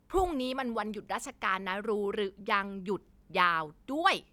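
No technical faults are audible.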